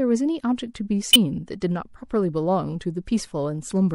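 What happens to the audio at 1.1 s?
From 1.13 to 1.16 s, a corrupt frame is decoded: about 30 ms, roughly two frames' worth, where damaged bits were played as if valid. Misread gains and codes put energy at wrong frequencies, producing a fairly loud glitch, peaking at roughly -10 dBFS.

Around that moment, as across the whole clip, the speech has a plainly audible watery, swirly quality. That sound points to MP3 compression at a low bitrate of about 64 kbps as the likely cause, with weak frequency lines dropping in and out between frames.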